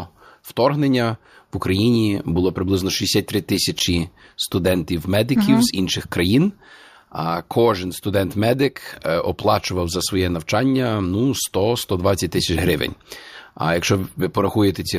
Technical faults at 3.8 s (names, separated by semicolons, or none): block of digital silence